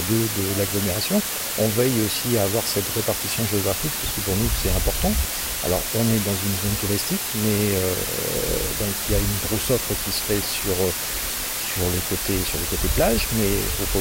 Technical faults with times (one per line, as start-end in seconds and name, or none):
0.00-14.00 low bit depth with dither